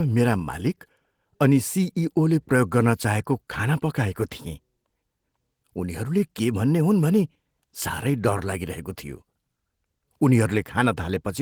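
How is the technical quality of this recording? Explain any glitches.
No glitches can be heard in this speech recording. The Opus voice compression keeps the full band, with content reaching about 20.2 kHz, and its coding leaves only light traces, which fits a bitrate around 20 kbps in hybrid mode.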